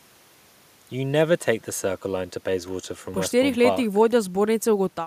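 A speech recording, and nothing is technically wrong with it.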